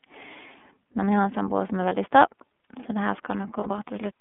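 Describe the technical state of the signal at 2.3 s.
At 2.3 s the speech carries iLBC codec damage, present throughout. Each 30 ms frame's excitation is coded independently, giving a plainly rough, synthetic texture consistent with the 13.33 kbps mode. A spectrogram shows energy confined to roughly 200 Hz to 3.5 kHz, with nothing above.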